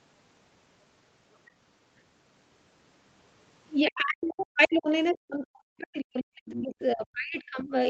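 Speech, carried over a call path whose top end stops at 8 kHz, which fits a wideband Opus link. From 3.88 to 4.9 s and again from 5.11 to 7.73 s the talker's voice is repeatedly pushed down, in places by about 40 dB, so it fades and cuts out in pieces. This is speech suppressed in double talk, most likely an echo canceller ducking everything while the far end talks. On a waveform the envelope collapses into gaps over about a second in the first stretch and about two seconds in the second. A spectrogram shows the speech bands thinning or going nearly blank there. Between 6.5 and 6.64 s a brief scrap of the other side's voice leaks through, about 15 dB below the speech. It is likely loudspeaker echo that the canceller left in the microphone signal, and it would show as a faint, short patch of energy inside the suppressed region.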